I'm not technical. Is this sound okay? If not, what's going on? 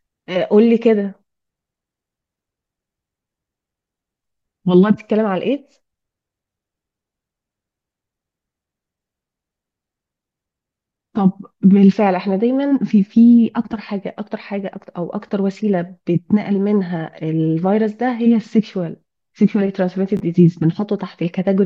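No, there are two brief glitches called chunks out of order. A 10-millisecond slice of audio arrived late and played after the slices meant to follow it, around 9.71 to 9.75 s and again around 20.17 to 20.2 s. Nothing goes missing, but each spot sounds like a tiny jumbled stutter.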